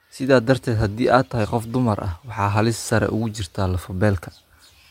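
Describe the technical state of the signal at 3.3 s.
At 3.3 s the speech signal is intact, with no technical fault present at that moment.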